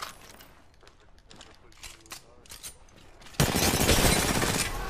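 No technical faults can be heard anywhere in the clip. Nothing in the sound calls for a timestamp or a closer look.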